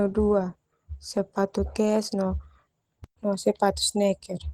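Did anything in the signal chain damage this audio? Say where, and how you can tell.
Yes. Across the whole clip the speech sounds hoarse and grainy, with a rough, noisy top end. That points to the codec stage, likely Opus compression in hybrid mode, where a speech coder carries the lower band and noise fills the upper bands, consistent with about 16 kbps.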